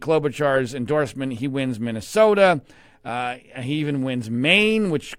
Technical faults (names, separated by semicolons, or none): none